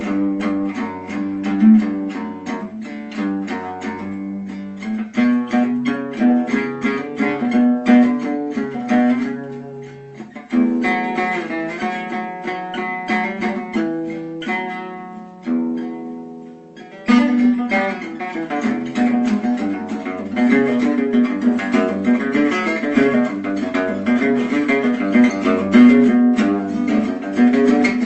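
No technical faults are audible.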